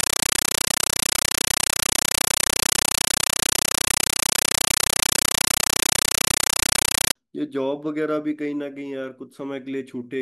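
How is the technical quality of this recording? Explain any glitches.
Not great: the first 7.15 seconds are unusable. From 0.0 to 7.15 s there's a compressed stream played as audio. The link carried encoded Dolby Digital data, and something treated it as plain PCM instead of decoding it. You hear each coded frame as an 8 ms blast of noise followed by silent padding, repeating at 31.25 per second, which fits an AC-3 stream. The result is loud, chattering static where the speech should be. The fault stops at 7.15 s.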